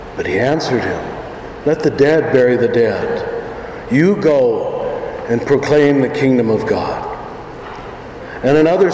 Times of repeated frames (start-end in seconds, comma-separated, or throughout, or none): none